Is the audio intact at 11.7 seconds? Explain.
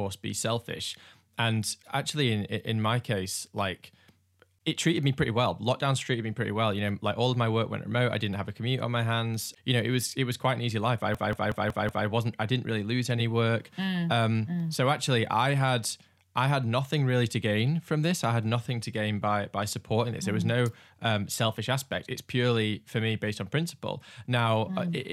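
No. From 11.15 to 12.07 s, after "an easy life I", a system hang loop occurs: the system froze while the audio hardware kept replaying one ring buffer, which fits an 8192-sample buffer. A 185.76 ms slice repeats five times at 5.38 Hz, a machine-gun stutter, before "wasn't I didn't really" resumes with essentially nothing lost.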